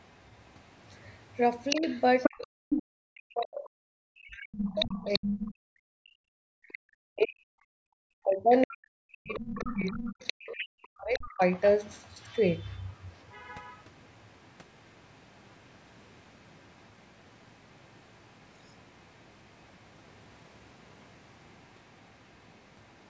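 A speech recording in which a second voice, the other side's voice leaking through, can be heard at 1.7–2.83 s, 3.44–3.65 s, 4.65–5.51 s, 8.61–8.72 s and 9.28–13.23 s. The first stretch is loud, only about 5 dB under the main talker. The others sit roughly 10 to 20 dB down. This is likely loudspeaker playback reaching the microphone and left behind by an incomplete echo canceller. Between 1.78 and 11.41 s the main talker also shows speech suppressed in double talk. Their level repeatedly drops and cuts out, at worst by around 40 dB, for about 7 s in total. This is likely the canceller ducking everything while both sides overlap. The band of the call's microphone path stops at 8 kHz.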